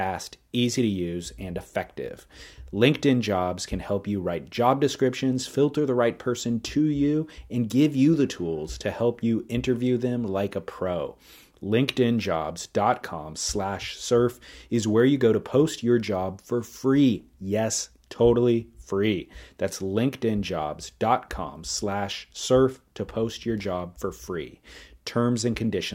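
No audible technical faults anywhere in the speech recording.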